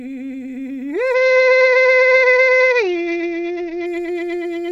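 Bluetooth SBC bit pool drop from 1.14 to 3.86 s in this music clip: the treble dulls and a gritty noise rises, which fits the encoder cutting its bit pool from 28 to 9, around 78 kbps, starving the top sub-bands and coarsely quantising the rest until the rate recovers.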